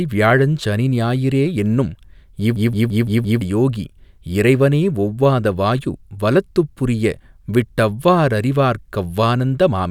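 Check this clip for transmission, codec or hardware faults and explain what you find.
There's one clear fault in the clip. From 2.56 to 3.41 s there's a system hang loop: the system stalled while the sound hardware kept replaying its ring buffer. A 171 ms chunk repeats five times at 5.86 Hz, a machine-gun stutter consistent with an 8192-sample buffer, and about a second of speech is lost.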